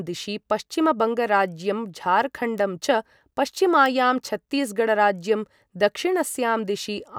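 Two sharp, isolated ticks cut through the speech at 2.58 s and 3.86 s, each peaking at about -16 dBFS and unrelated to the surrounding signal. These are bit error spikes: a flipped bit briefly throws one or two samples far off their true value before the waveform snaps back.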